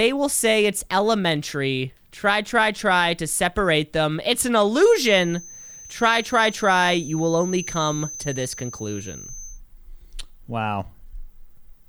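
From 4.69 s to 9.61 s there's a feedback whistle, a thin steady tone at 6.2 kHz sitting around 15 dB under the speech and swelling and fading slowly in level. Most likely the speaker-to-mic loop was hovering right at the edge of feedback without tipping over.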